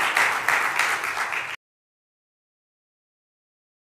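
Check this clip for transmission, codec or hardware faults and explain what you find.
One fault: an audio dropout to silence from 1.55 s to the end, likely lost input with silence written, so the sound cuts off into total silence, no room tone.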